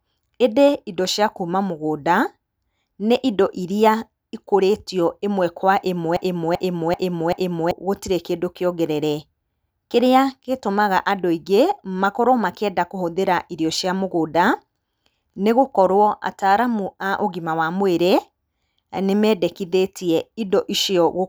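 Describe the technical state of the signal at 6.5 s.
At 6.5 s the playback or stream has likely stalled and keeps resending its last held fragment: a broken-record loop. Just after "ĩmwe kwa", from 6.17 to 7.71 s, a 0.39 s slice repeats exactly four times back to back, and the audio that belonged there is lost.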